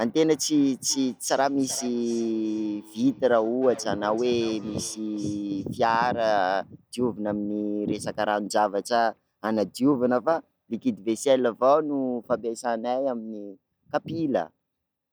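From 0.85 s to 5.78 s the speech carries a feedback echo between two devices. A second device in the room plays back what this microphone sent, and the microphone picks it up again. Its echo canceller only removes its own playback, so that loop goes through. Each word returns about every 400 ms, thinner and ringing, peaking at about 19 dB below the speech. On a spectrogram, faint copies of each syllable's pattern trail behind it at that regular spacing.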